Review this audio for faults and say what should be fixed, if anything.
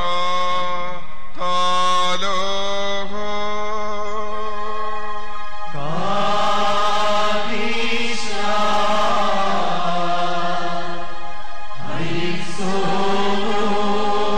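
Nothing here needs fixing, because the signal holds steady throughout with no technical fault to report.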